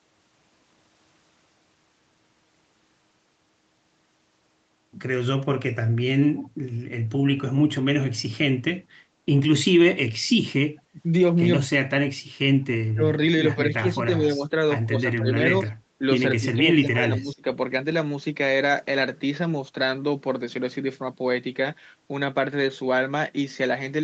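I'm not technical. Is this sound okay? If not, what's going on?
No. At the other end of the call, the echo canceller likely let a little loudspeaker sound through (an echo leak), so a faint copy of the voice returns about 0.17 s late, at 6.37 to 6.49 s.

When both sides spoke at once, the canceller probably couldn't tell them apart and turned the talker down too. This speech suppressed in double talk makes the voice dip or drop at 9.94 to 10.0 s, 10.92 to 10.98 s, 12.94 to 13.03 s, 13.56 to 14.54 s, 14.88 to 15.39 s and 16.38 to 17.47 s.

The background was also gated by the echo canceller while the loudspeaker played, so the room sound briefly drops away from 15.72 to 15.91 s.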